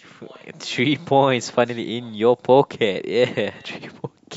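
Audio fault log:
No faults are heard anywhere in this speech recording.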